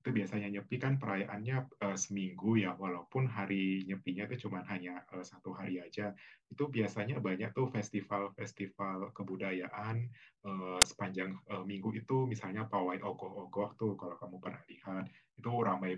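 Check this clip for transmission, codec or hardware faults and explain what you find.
One fault is present. At 10.82 s, file tags are played as audio. An embedded cover picture's compressed bytes are read as samples, giving a hard-edged burst of very loud white noise.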